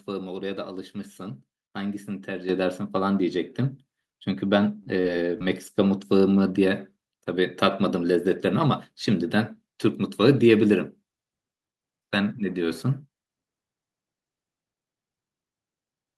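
The call software judged the microphone too quiet and raised its input volume in two steps: about 8 dB at 2.49 s, then about 3 dB more at 3.51 s. Each microphone volume step-up lifts the speech and the background together, abruptly.

Short concealed packet loss follows at 4.83 to 4.96 s, 5.01 to 5.06 s and 5.38 to 5.42 s. In each, 20 to 40 ms of audio arrived too late to decode, and the receiver filled the gap by extending the preceding sound before blending back, producing brief smears or wobbles.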